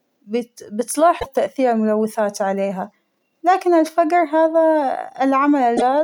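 Damaged data in a compressed stream appears from 1.16 to 1.26 s, just before "تاثير الملوثات عليها", and again from 5.74 to 5.82 s. Corrupted bytes make the decoder misread frames and lose sync until it finds the next header, giving brief glitches.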